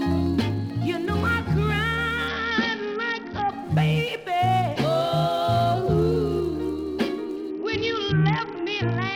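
The audio runs over a Bluetooth link with a Bluetooth SBC bit pool drop, twice: from 2.28 to 3.50 s, and again from 7.5 s to the end. In both spots the treble goes dull and a gritty noise creeps in, which fits the phone backing the SBC bit pool way down, roughly from 31 to 7 or around 61 kbps, on a congested link. With so few bits, the top sub-bands starve and everything else gets coarsely quantised until the rate recovers.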